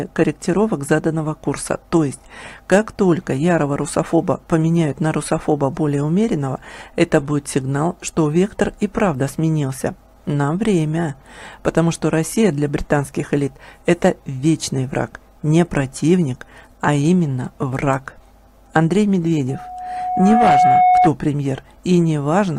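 At 2.73 to 2.78 s and again at 18.76 to 18.79 s, peaks drive a stage past its limit, by about 4 dB and then about 2 dB, so hard clipping cuts their tops flat. The added high harmonics come through as brief crackles on those loud moments.

From 19.49 to 21.12 s, a microphone picks up the loudspeaker it feeds and the loop gain passes one at 731 Hz. This loudspeaker feedback squeal swells over roughly a second into a steady tone that ends up around 5 dB above the rest of the sound.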